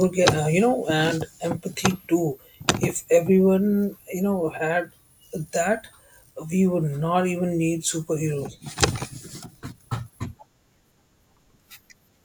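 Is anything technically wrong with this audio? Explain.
No, nothing is technically wrong with this audio.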